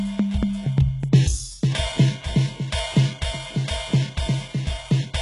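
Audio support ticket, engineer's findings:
Music, throughout: treble gritty and metallic, upper harmonics not lining up with the lower spectrum, nothing above 11.1 kHz. Likely HE-AAC compression, heavy damage fitting roughly 12 kbps; treble rebuilt by copying lower bands upward under a coarse envelope.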